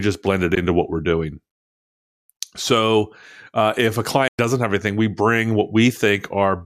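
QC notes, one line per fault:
0.55 s and 4.28–4.39 s, Bluetooth dropout: silence of about 13 ms after "just blend it" and about 107 ms after "uh if a", likely from packets missing the headphones' deadline. Sound resumes later, as if playback continued. The waveform shows flat gaps, and the spectrogram shows blank full-band strips.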